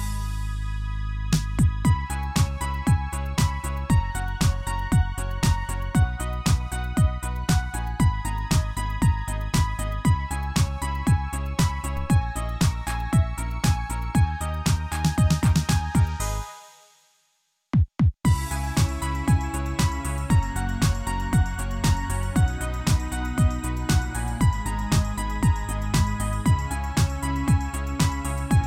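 A low thump at 11.97 s marks a DC step: the waveform's zero line jumps by about -27 dBFS, then drains away through a roughly 2 Hz high-pass.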